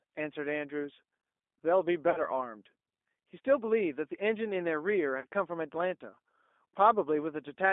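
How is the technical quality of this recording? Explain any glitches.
The speech is narrowband and codec-coloured throughout, with two brief concealment glitches.

G.729 codec, throughout: the line passes only about 250 Hz to 3.6 kHz, and the speech is rebuilt from a filter, pitch predictor and sparse pulses, which fits an 8 kbit/s G.729A stream. The result is a plainly audible rough, synthetic edge. A simple band limit would only dull the sound and would not add this texture.

VoIP packet loss concealed by the speech codec, 2.1 to 2.23 s and 5.2 to 5.26 s: each event covers about 40 ms of lost audio, which points to two missing packets. The decoder extends the last pitch and filter, so the sound turns into a fading buzzy tone or coloured noise and stays weakened briefly after packets return. A plain dropout would instead leave silence or a click.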